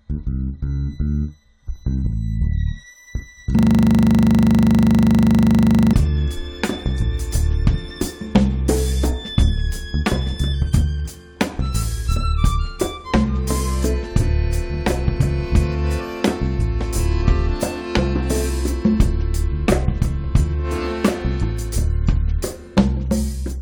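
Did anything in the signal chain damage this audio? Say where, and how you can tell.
Yes. A system hang loop from 3.59 to 5.93 s: a stalled driver let the hardware replay one 40 ms buffer, heard as a steady 25 Hz buzz.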